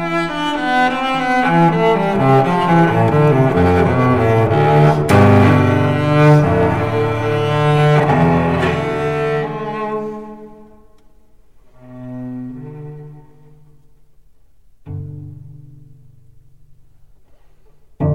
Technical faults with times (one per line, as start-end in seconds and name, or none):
1.46-6.70 hard clipping